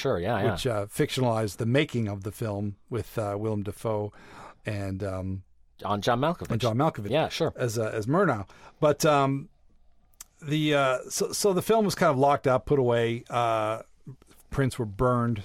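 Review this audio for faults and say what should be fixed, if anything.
Nothing to fix: no faults were found anywhere in this speech recording.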